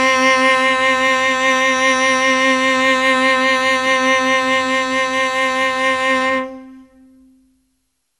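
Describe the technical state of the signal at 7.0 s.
At 7.0 s, as throughout, the music shows generation loss, likely from about seven rounds of lossy MP2-style coding at a rate near 96 kbit/s, leaving it swirly, hollow and smeared, with blurred attacks and nothing above 11.9 kHz.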